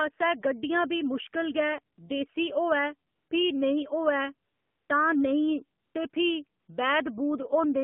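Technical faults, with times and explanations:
Throughout, AMR narrowband mobile codec: the whole clip has the sound of a 2G/3G phone call. The band runs only from about 150 Hz to 3.4 kHz, so the lows are thin and all the air and sibilance above that is gone. The codec damage is plainly audible: speech comes out buzzy and a bit synthetic. That's what you get when the vocal-tract model has very few pulses per subframe to work with, and it fits a low mode around 7.4 kbps.
1.96–1.98 s, 3.10–3.30 s, 4.48–4.90 s, 5.80–5.94 s, 6.10–6.12 s and 6.60–6.68 s, AMR comfort noise: six times the phone decided the talker had gone quiet and stopped sending speech frames. The gaps last 20, 200, 420, 140, 20 and 80 ms. In each one the receiver fills the hole with a smooth, steady synthetic hiss built from a rough level and spectrum estimate, so the real background drops out and that bland noise switches in and out.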